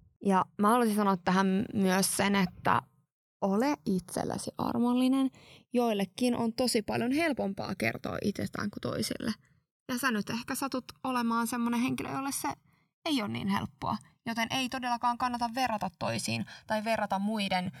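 From start to finish the stereo channels are drifting apart. The left and right signals appear to come from two devices on separate clocks, so the delay between them creeps steadily upward, reaching roughly one and a half milliseconds by the end, which fits clocks that differ by around 70 parts per million. Summed to mono, the speech forms a comb filter whose notches sweep slowly through the spectrum, heard as a gradual flanging swirl.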